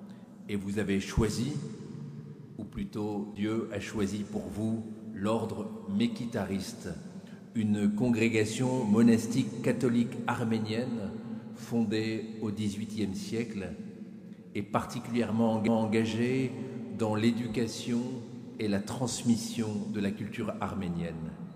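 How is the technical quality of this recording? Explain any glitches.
Two brief glitches interrupt the recording, both CD skips, at 3.35 s and 15.67 s. Each is a tiny tick, a dropout lasting only a few milliseconds, after which the audio resumes from a different point, so the flow lurches abruptly rather than continuing smoothly. The cause is the disc player's laser being knocked or thrown by a flaw onto another turn of the spiral track. The player briefly mutes while it reacquires the track, then carries on from the new position.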